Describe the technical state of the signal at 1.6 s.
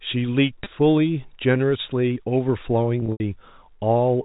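At 1.6 s the speech is intact, with no fault present, and it carries the narrow sound of G.711 telephone coding, which fits A-law at 64 kbps and passes nothing above 4 kHz.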